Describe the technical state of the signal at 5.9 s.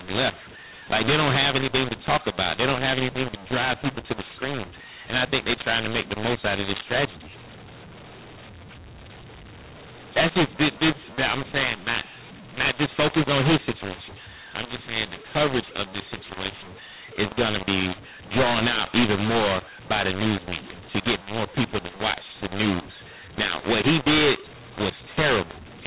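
At 5.9 s the speech carries a mu-law and A-law mix-up, present throughout: mu-law samples are decoded as A-law, scrambling levels, making the audio harsh and filling pauses with noise.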